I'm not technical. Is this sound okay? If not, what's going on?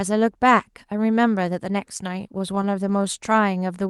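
No. From 2.21 to 3.06 s there are repeated stalls (stutter): late-arriving data makes the sound hold eight times, each hold very brief, so the speech drags slightly.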